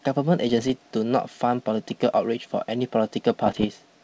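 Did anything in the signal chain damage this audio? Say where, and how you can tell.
Yes, bit errors on an ADPCM link, at the transmission stage of what sounds like a G.722 wideband call. Pops and rough, gritty bursts with brief level jumps appear from 0.49 to 0.70 s and again, more densely, from 3.46 to 3.66 s. Each flipped bit corrupts the decoder's step size and predictor, so the damage rings on for milliseconds. On a spectrogram these show as broadband vertical smears; the waveform shows spiky, uneven amplitude through both stretches.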